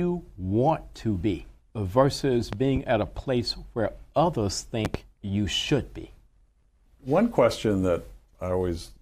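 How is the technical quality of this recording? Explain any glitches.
Two loud pops mar the speech. The first runs from 2.53 to 2.79 s and the second from 4.85 to 4.98 s. Each is a double pop peaking about 10 dB and then about 15 dB above the speech. A sudden electrical step, likely from a connector, switch or static discharge, was added to the signal, and the downstream circuitry shaped it; each is heard as a pair of thumps. The speech continues underneath without interruption.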